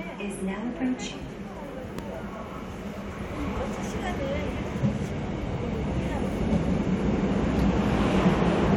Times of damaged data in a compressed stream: none

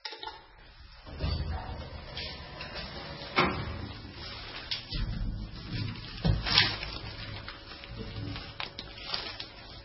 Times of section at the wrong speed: none

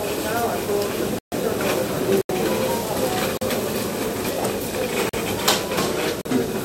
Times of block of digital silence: 1.19-1.32, 2.21-2.29, 3.37-3.41, 5.09-5.13, 6.21-6.25

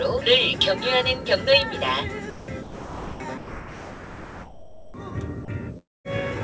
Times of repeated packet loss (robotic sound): none

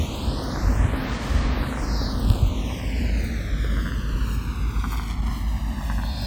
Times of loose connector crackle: 2.23-2.40, 4.90-5.28

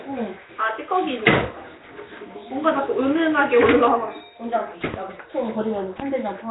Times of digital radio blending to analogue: none

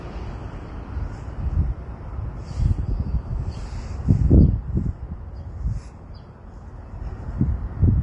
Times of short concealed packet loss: none

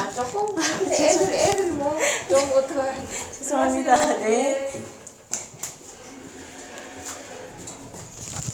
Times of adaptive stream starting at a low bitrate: none

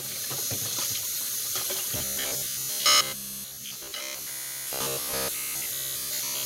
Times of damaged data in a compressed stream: none

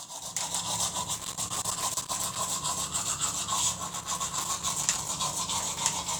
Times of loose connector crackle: 1.14-2.37, 3.87-5.09

